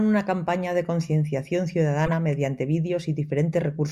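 Right after "una campaña de concienciación", from 2.06 to 2.13 s, a short burst peaking around -15 dBFS cuts across the speech. This is a corrupt frame decoded: damaged bits in a few compressed frames were played anyway, so misread codes scattered energy into the wrong frequencies.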